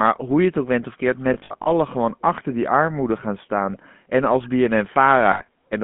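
Throughout, the speech carries the buzzy, gravelly roughness of the GSM full-rate codec at 13 kbps. It rebuilds the voice from a vocal-tract model excited by a sparse, regularly spaced pulse train, so the damage is plainly audible. It is more than simple band-limiting: a line band of 150 Hz to 3.5 kHz alone would sound thin but smooth, while this grain sits inside the voice itself.

From 1.34 to 1.68 s, after "ook went of keert" and before "gewoon achter die armoede", there are lost GSM frames. About 180 ms of signal is missing across 320 ms, in short runs, the longest around 70 ms. Each gap is filled by repeating the last good frame, which fits 20 ms frames. The result is a rough, metallic ring rather than the silent holes or clicks of ordinary packet dropouts. The same happens at 5.32 to 5.49 s, where about 100 ms is lost over 160 ms.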